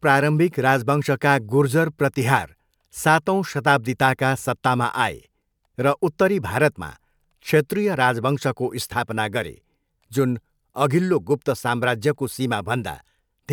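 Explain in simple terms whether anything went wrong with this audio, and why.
Nothing went wrong with this audio, since listening through the recording turns up no fault to point to.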